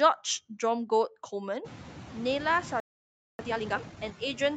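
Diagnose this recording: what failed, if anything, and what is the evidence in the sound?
Call processing: noise suppressor artifacts throughout. Room noise, rising sharply near 1.5 s, dips about 4 dB between words and swells under speech.

Playback: a playback stall from 2.80 to 3.39 s. Speech drops to silence for 0.59 s mid-flow, likely because the player's buffer ran dry.

Playback: time-compressed catch-up from 3.39 to 3.97 s. Speech runs at double speed but normal pitch, as small pieces are cut and cross-faded.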